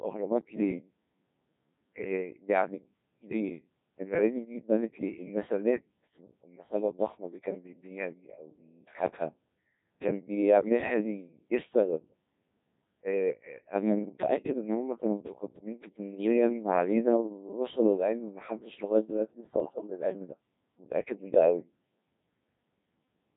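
Robotic, buzzy speech runs throughout, heavily degraded: the Codec 2 vocoder at 1.6 kbit/s rebuilds the voice from sine waves using only pitch, voicing, energy and spectral envelope. From 19.60 to 19.90 s the voice breaks into warbling, bleeping gibberish. Bit errors on digital voice radio, around 7 percent, corrupted the pitch, level and spectrum of a handful of frames.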